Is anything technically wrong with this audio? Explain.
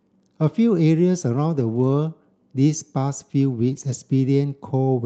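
Yes. Around 1.55 to 1.89 s and 3.67 to 3.93 s, you get a lost packet rebuilt from error correction: the next packets carried low-bitrate Opus copies, so no gap, just rougher, noisier stretches.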